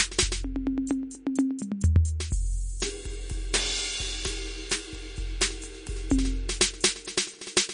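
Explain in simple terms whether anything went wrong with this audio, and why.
Heavy MP3 compression is the likely culprit, running through the whole piece of music. When the encoder has too little data to spend, it cuts away the highest sounds entirely and drops quieter details that flicker in and out. Here nothing is left above about 10.1 kHz, so the music sounds dull and muffled at the top, with a watery, swirling quality and blurred edges on sharp hits from start to finish.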